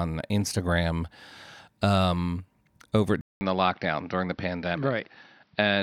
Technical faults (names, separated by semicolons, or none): input switched to a poorer device